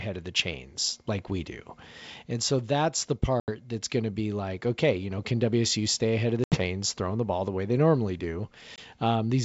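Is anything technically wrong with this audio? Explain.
Yes. The speech, carried over G.722 wideband telephone coding at 64 kbit/s, is interrupted three times by packet loss on an ADPCM call: at 3.40 to 3.49 s and 6.44 to 6.63 s (each 80 ms of audio lost), and at 8.76 to 8.79 s (20 ms). Missing packets become silence, and the decoder's predictor and step size drift from the sender's. Each gap is a hard-edged dropout after which the speech returns slightly distorted before settling. On a waveform these show as flat silent sections with abrupt edges. On a spectrogram they appear as blank vertical bands across all frequencies.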